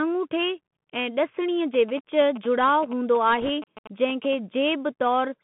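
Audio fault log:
throughout, Bluetooth CVSD headset codec: the speech is squeezed into a narrow phone band of roughly 150 Hz to 3.4 kHz, with a granular hiss underneath and scratchy s sounds, because the one-bit up/down coder at 64 kbps can't keep pace with fast, bright sounds, so its adapting step size falls behind and distorts them.
1.74 to 4.35 s, GSM signalling bursts: a galloping run of short buzzes at about 217 Hz sits around 15 dB below the speech. That's a nearby 2G phone signalling, with its radio bursts picked up and rectified by the audio circuitry into audible buzz.
3.41 to 3.50 s, bit errors on a Bluetooth voice link: a short rushing crackle, no sharp clicks. Around 3 percent of bits flipped on the headset link, and since each CVSD bit only nudges the level slightly and the errors fade out, you hear noise rather than pops.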